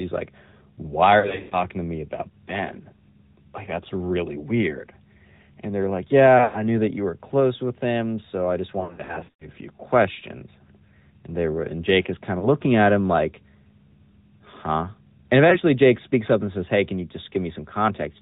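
Throughout, the speech has passed through the AMR narrowband mobile codec. Nothing above 4 kHz survives, and the voice has a buzzy, synthetic edge, which points to a mid rate of around 10.2 kbps. A plain low-pass filter would only dull the sound. Here the whole voice is rebuilt by the codec's vocal-tract model, so the artefacts are plainly audible and sit in the voice itself.

Lost AMR speech frames break the stream at 1.20 to 1.64 s, 6.38 to 6.63 s and 8.80 to 9.48 s. In these stretches the decoder covers missing 20 ms frames by repeating the last good pitch and vocal-tract settings at falling gain. The sound smears and fades rather than cutting off. The longest run, about 120 ms near 1.2 s, drags out into near silence, and the voice returns rough. Single lost frames at 12.40 to 12.49 s and 15.50 to 15.58 s cause only brief dips. This smeared decay is what separates concealment from a hard dropout, which would leave a clean gap or click.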